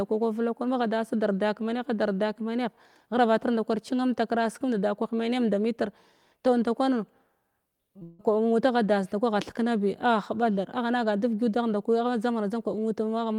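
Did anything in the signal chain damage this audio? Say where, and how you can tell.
Yes, the network leg of the call is where it went wrong, right around the 8-second mark. First comes a short concealed packet loss from 7.99 to 8.03 s. About 20 ms of speech didn't reach the decoder in time, and the receiver covered it by carrying the previous sound forward for about 13 ms before easing back into real audio. You hear that as a quick smear or wobble rather than a gap.

Straight after, from 8.03 to 8.21 s, there's a stretch where the speech turns into a drawn-out, synthetic continuation of the last sound, buzzy or hissy and fading, for about 160 ms. It never drops to silence, because the concealment covers the whole span. When real audio resumes, the speech has jumped ahead. That points to a long network dropout as the likely cause, with roughly 160 ms of the stream lost and papered over by the receiver.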